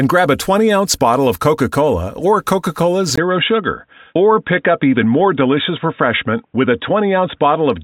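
At 3.16 s a 20 ms gap, speech losing all above 3.8 kHz under new faint noise: likely an input switched to a poorer device.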